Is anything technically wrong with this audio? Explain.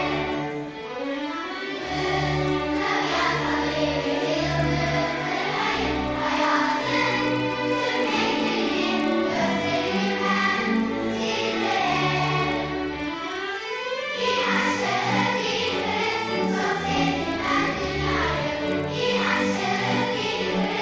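Yes. Throughout the clip there is a regular ticking at 25 per second, the signature of a resampler restarted on every block. The conversion, which fits 44.1 kHz down to 16 kHz, treated each 40 ms block in isolation, so each block edge lacked true neighbouring samples and picked up a small error. Unlike mains hum, this 25 Hz buzz disappears in quiet passages, and unlike dropouts, nothing is missing.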